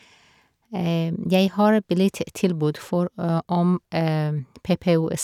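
No technical faults can be heard anywhere in this speech.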